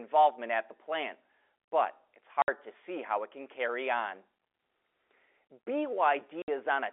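A speech recording carried over G.711 telephone coding, band-limited to roughly 300 Hz to 3.5 kHz, is broken twice by packet loss filled with silence: 60 ms dead gaps at 2.42 to 2.48 s, just before "to see how it", and at 6.42 to 6.48 s. Each hole fits three 20 ms packets dropped in a row. Unlike concealed loss, which smears or repeats sound, these gaps go to true silence with hard edges.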